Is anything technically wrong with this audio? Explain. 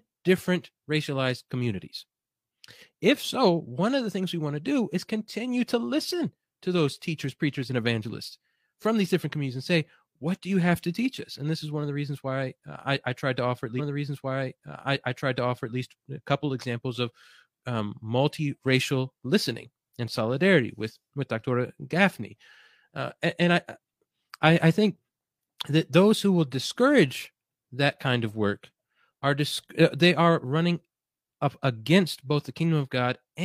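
Yes. From 13.75 s to 15.75 s there is a stream segment repeated: about 2.0 s of the speech plays a second time, with a small blip at the jump back. The player fetched or queued the same chunk of the stream twice, so it splices an already heard stretch back into the timeline and the clip runs about 2 s long. Unlike a stutter or buffer loop, which repeats a tiny fragment many times, this is one clean replay of a whole, intelligible stretch.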